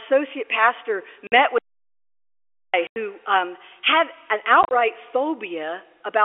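Packet loss filled with silence first hits at 1.27 to 1.32 s, where the receiver got no data and inserted silence, cutting a 50 ms hole with hard edges. Its length points to 10 ms packets. A longer break follows from 1.58 to 2.74 s: the input likely disconnected or was muted while recording continued, so this audio dropout to silence leaves 1.15 s of dead silence, without even the narrowband telephone hiss. Packet loss returns at 2.87 to 2.96 s as a 90 ms gap, then from 4.63 to 4.71 s as several short holes totalling 60 ms, none longer than 30 ms.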